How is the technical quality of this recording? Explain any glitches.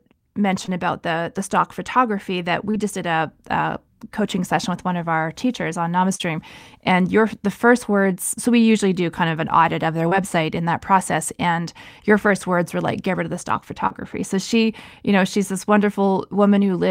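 Five brief glitches interrupt the speech, all short concealed packet loss: at 0.65–0.69 s (just before "about the the stock"), 2.71–2.75 s, 6.15–6.21 s (after "of our teachers on"), 10.09–10.13 s (between "an audit of their" and "in that process and"), and 13.87–13.92 s. Each time, about 20 or 40 ms of audio arrived too late, and the receiver patched the gap by extending the preceding sound before easing back into real audio. You hear a quick smear or wobble. On a spectrogram, harmonics run unnaturally flat for a few hundredths of a second, and the waveform shows a brief repetitive stretch.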